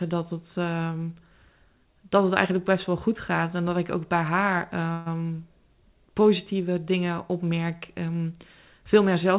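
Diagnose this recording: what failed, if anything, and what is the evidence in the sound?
A call audio freeze at 4.92 to 5.08 s, right after "ik ook bij haar": the sound is stretched into a fading buzz for about 138 ms, and then the speech resumes intact but late. The likely cause is network packet delay draining the jitter buffer.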